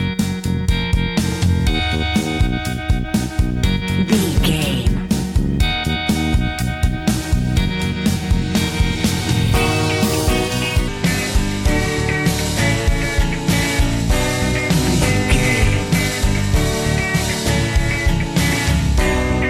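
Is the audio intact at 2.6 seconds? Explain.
Yes, at 2.6 seconds the audio plays through cleanly, with no dropout, click, distortion or other fault audible at that point.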